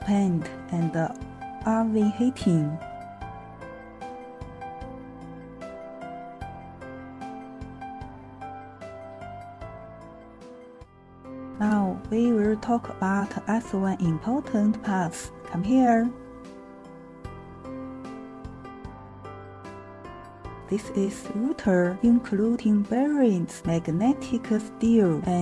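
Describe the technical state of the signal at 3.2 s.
At 3.2 s the signal is intact, with no dropout, distortion, noise burst or other fault to be heard.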